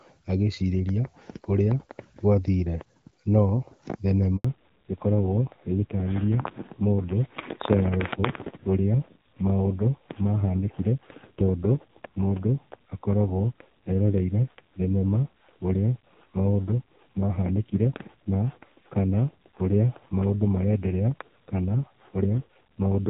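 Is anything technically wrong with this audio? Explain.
Yes, there are two related problems, both starting around the 4.4 s mark.

First, a handover gap from 4.36 to 4.44 s. The call gets passed from one network to another, and for that 80 ms no speech frames make it through. You hear the speech drop out almost instantly, a short hole of silence, and then it picks up again on the new link. Whatever was said in that stretch is simply gone.

Right after, from 4.44 s to the end, there's a fallback to narrowband. Before the switch the call has the clear, light-touch sound of an HD Voice (AMR-WB) link, and the quality points to a rate around 12.65 kbit/s. After the handover the codec drops back to narrowband, which sounds like AMR-NB at roughly 5.9 kbit/s. Nothing above 4 kHz survives, so the speech turns duller and rougher for the rest of the clip.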